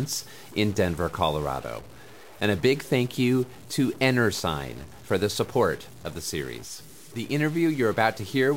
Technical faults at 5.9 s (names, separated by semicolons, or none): stuck bit